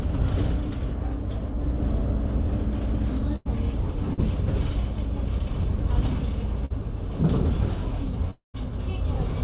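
A clip of everyday sounds carried over a call link, whose G.711-style narrowband coding leaves nothing above 4 kHz, so a spectrogram shows a flat ceiling at that line. A burst of packet loss occurs at 3.36–3.47 s and again at 6.66–6.72 s. The receiver extends the last sound as a fading buzz or hiss for about 90 ms and then about 45 ms, and roughly 80 ms and 40 ms of real audio are skipped. On a spectrogram these appear as smeared, repeated bands that taper off before an abrupt resumption. A short concealed packet loss at 4.13–4.20 s leaves a brief smear where about 40 ms went missing and was bridged with synthesised continuation. The waveform shows a small, slightly repetitive patch blended back in. Between 8.31 and 8.56 s the sound turns into a decaying buzz or hiss and then drops into near silence for about 130 ms before returning with roughly a quarter-second missing. This is likely a long network dropout. 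The waveform flattens almost to nothing there, and the spectrogram goes empty.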